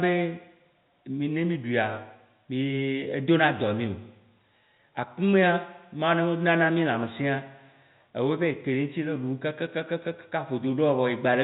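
No technical faults are audible.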